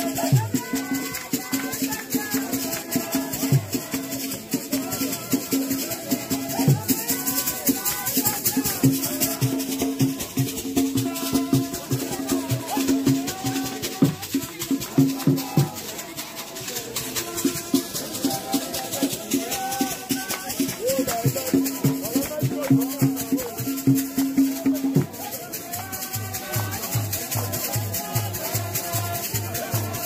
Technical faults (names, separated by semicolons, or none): pre-emphasis left on